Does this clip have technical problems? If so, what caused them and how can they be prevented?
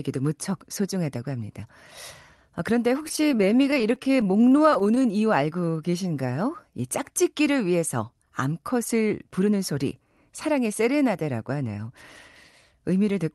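Yes. From 3.03 to 5.06 s the speech shows repeated stalls (stutter). Packets arrived late, the jitter buffer kept running dry, and the receiver extended the last sound through dozens of holds of up to 18 ms, about 485 ms in all. That is a quarter of the span, with nothing lost. A steadier network path or a larger minimum buffer target would prevent this.

From 5.47 to 6.34 s a jitter buffer slow-down stretches the speech to 88% speed at unchanged pitch. The receiver repeated pitch periods to rebuild its reserve, adding 110 ms and drawing the sounds out. Keeping the buffer from draining, through lower jitter or a higher baseline target, avoids it.

From 8.45 to 9.72 s a jitter buffer speed-up runs the speech at 107% speed at the same pitch. After a backlog built up, the receiver trimmed short pitch-period pieces, removing about a tenth of a second, so the delivery sounds hurried. Smoother packet delivery without bursts would prevent the excess build-up.

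The Opus call path, band-limited to 12 kHz, is not a fault.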